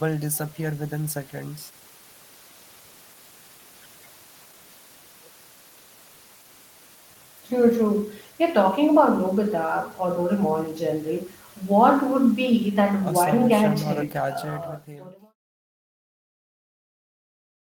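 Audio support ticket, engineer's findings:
No faults found in the speech; the smooth fade-out from around 14 s to 15.36 s is a deliberate edit with no click or hard edge at the tail.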